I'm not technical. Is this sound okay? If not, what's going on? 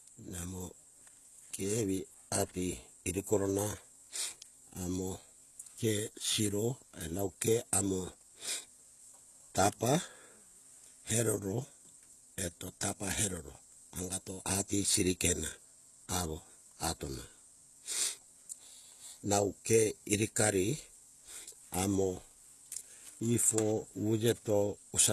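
No, not quite. All the way through, the speech has a gritty, metallic edge, especially on s sounds, and nothing comes through above about 12.3 kHz. That's likely HE-AAC compression, which keeps the lower sound and fakes the treble by copying it upward.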